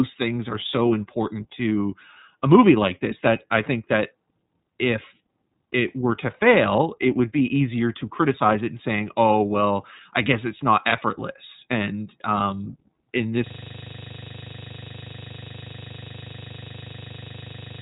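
iLBC codec damage runs through the whole clip. The speech is squeezed into a narrow band with nothing above about 3.8 kHz. The low-rate coder rebuilds each frame's excitation on its own, without drawing on the frame before, so the voice comes out clear but plainly rough and synthetic. The texture points to the 13.33 kbps mode with 30 ms frames.

A system hang loop begins at 13.47 s, right after "effortless and um in", and lasts to the end of the clip. The machine or its audio driver froze, but the sound hardware kept replaying the same ring buffer. A 40 ms piece of audio repeats exactly, more than a hundred times, which fits a buffer of that length. It cycles at 25 repeats per second.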